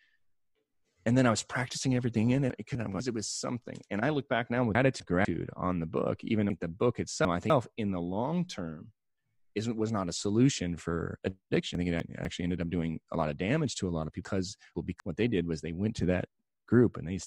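At 2.5–3.0, 4.75–5.25, 6.5–7.5, 11.75–12.25 and 14.25–15.0 s the speech has chunks out of order. A 250 ms segment plays one, one, three, one and two slots late respectively, so each passage sounds jumbled at its hard joins.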